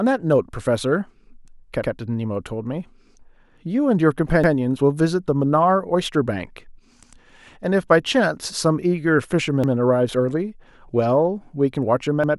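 At 1.84, 4.44, 7.04, 9.64 and 12.24 s the speech stutters briefly, a symptom of overlapping chunks: the audio was handled in 2.5 s blocks, each starting 100 ms before the previous one ended, so that 100 ms replays at every join. It sounds like a click followed by a short echo-like repeat every 2.6 s. On a waveform, each join shows a step discontinuity and a duplicated stretch. A spectrogram shows a sharp vertical line and the same pattern printed twice side by side.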